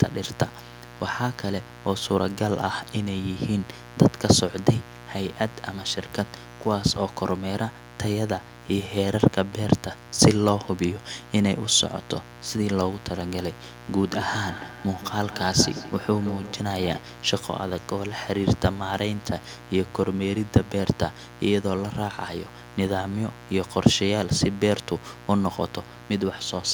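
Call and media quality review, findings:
Mains buzz, entire clip: steady raspy 60 Hz buzz with harmonics into the kilohertz range, around 20 dB below speech. Switching spikes from a dimmer, rectifier or unshielded cable.

Feedback echo between two devices, 14.08–17.12 s: speech returns roughly every 150 ms, thinner and ringing, peaking about 13 dB below speech. Second device's playback re-captured by a nearby microphone, outside its echo canceller.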